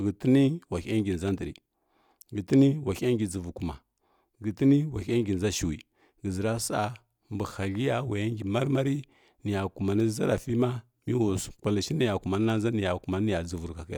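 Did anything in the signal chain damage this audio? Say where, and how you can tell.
No, nothing in the signal chain damaged this audio.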